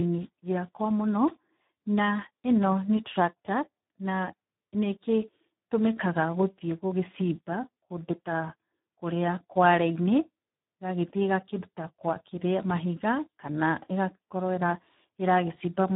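From start to finish the speech carries heavy Speex codec damage, with the hoarse, noisy texture of a starved CELP excitation that fits a setting near 8 kbps. Nothing survives above about 3.9 kHz, so the sound is narrowband and dull, edging toward robotic.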